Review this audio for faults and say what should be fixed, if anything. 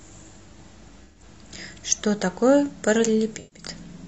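AAC frame loss with concealment at 1.04–1.23 s and 3.39–3.65 s: each dropout loses about 128 ms of speech, which fits three lost frames. The decoder patches each gap from the last good spectrum, leaving a brief smeared, noisy, phasey stretch. Protecting the stream with error correction or retransmission would stop these frames from being lost.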